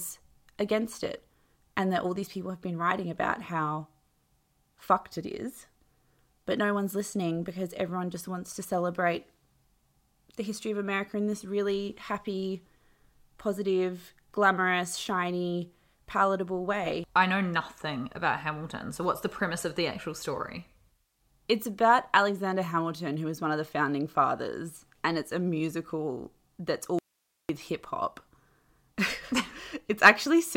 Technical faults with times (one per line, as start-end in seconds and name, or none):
26.99-27.49 audio dropout to a faint residue